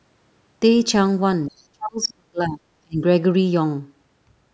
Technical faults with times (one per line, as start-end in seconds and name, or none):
1.49-3.03 speech suppressed in double talk
1.49-1.64 other side's voice leaking through